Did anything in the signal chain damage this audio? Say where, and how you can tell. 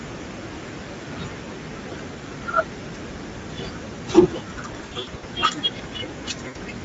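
Yes. At the codec stage, Speex coding runs through the whole speech clip, and the damage is plainly audible. The excitation is starved of bits, so the speech turns grainy and hoarse. That fits a bitrate of about 16.8 kbps.

On the network, VoIP packet loss concealed by the speech codec shows up between 4.71 and 5.25 s. About 300 ms of frames are missing, scattered across roughly half a second, and the longest gap runs 80 ms. A second loss of 80 ms comes at 6.47 s. In each gap the decoder fills in from its last pitch and filter with falling gain. The result is a buzzy tone or coloured noise that fades, and the voice stays weak or distorted for a moment after packets return.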